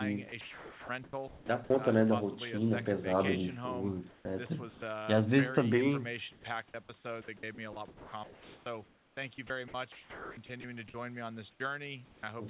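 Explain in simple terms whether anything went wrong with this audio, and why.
Sound chopped by the voice detector, at 0.29–1.7 s, 4.1–4.82 s, 6.32–10.94 s and 11.51–12.23 s: pieces of speech vanish and are replaced by artificial background hiss. The likely cause is the call's voice detector repeatedly deciding nobody was talking and briefly stopping transmission.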